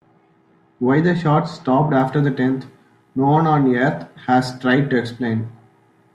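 A de-emphasis treble cut was applied wrongly to this speech recording, either where there was no matching pre-emphasis to undo or a second time, from 0.0 to 2.0 s. The response slopes smoothly downward, about 14 dB lower at 10 kHz than at 1 kHz, leaving the sound dull and muffled.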